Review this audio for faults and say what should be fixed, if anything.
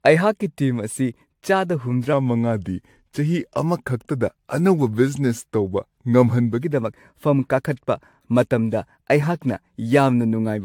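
Generation loss runs through the whole clip: swirly, hollow speech, smeared attacks, nothing above 19.3 kHz, likely from AAC re-encoded around seven times. Keep a lossless master and encode once.

From 2.13 to 6.62 s there's a section at the wrong speed, playing at 0.893x, so the speech sounds about two semitones lower and slower, likely from a clock mismatch. Confirm the sample rates match before editing or playback.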